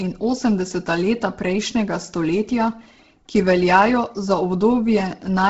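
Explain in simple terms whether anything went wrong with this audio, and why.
Something did go wrong, and it runs through the whole clip. The speech has a breathy, grainy edge, and there's nothing at all above about 7.7 kHz, so the top end sounds dull and fizzy at once. That's most likely Bluetooth LC3 compression squeezed hard: the codec throws away much of the upper detail to save data and fills some of the gap with soft noise, which is where that hissy, papery texture comes from.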